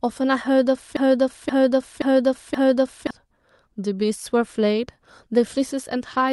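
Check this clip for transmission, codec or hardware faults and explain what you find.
One fault is present, in the speech carried over a call path whose top end stops around 12 kHz, as an Opus stream would. From 0.97 to 3.11 s there is a broken-record loop. The stream likely stalled and kept resending its last buffered fragment, so a 0.53 s piece plays four times back to back, and the speech that belonged in that stretch never arrives.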